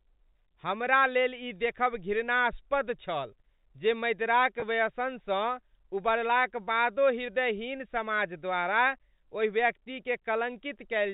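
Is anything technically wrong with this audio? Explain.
Yes. At 4.60 to 4.62 s, right after "छल जे मदिराक", there is packet loss with pitch repetition. About 20 ms of audio went missing, which fits a single lost packet. The receiver covered the hole by looping the last pitch period, so the speech briefly becomes a held, slightly buzzy tone. On a waveform, the gap shows as identical cycles repeating. On a spectrogram, the harmonics run flat for that instant instead of gliding, within the G.711 telephone band.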